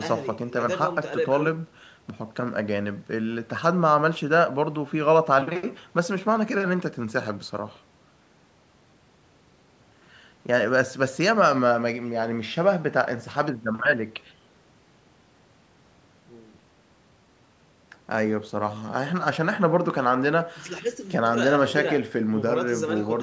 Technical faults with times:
none

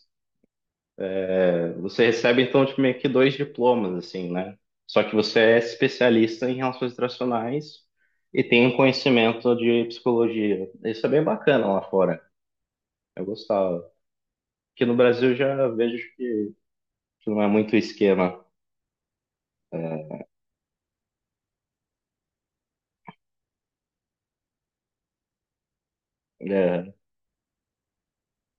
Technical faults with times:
none

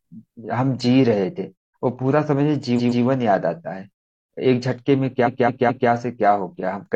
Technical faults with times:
2.75-3.01 repeated frames
5.23-5.87 repeated frames

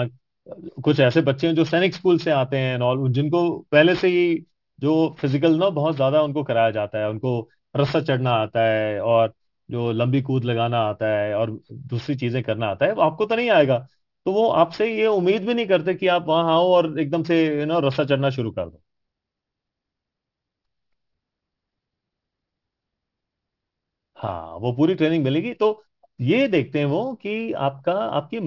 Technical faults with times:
0.00-28.47 aliasing

